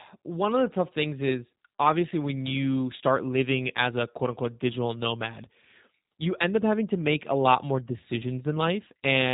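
All the way through, the speech carries plainly audible G.729 codec damage: nothing above 3.8 kHz, and a rough, synthetic edge from pulse-coded rebuilding that fits an 8 kbit/s rate.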